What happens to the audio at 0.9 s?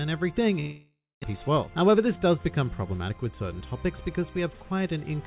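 Long network dropout, 0.6 to 1.26 s: packets likely stopped arriving, so the last sound fades into a buzz or hiss, then silence, and 0.4 s is lost.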